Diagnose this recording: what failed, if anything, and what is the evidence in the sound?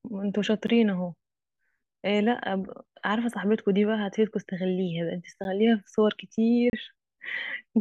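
Blocks of digital silence cut the speech at 0.67 s and 5.44 s, plus a 32 ms hole at 6.70 to 6.73 s. The buffer stage missed deadlines, fitting a 512-sample buffer, and the sound cuts out and back with no fade.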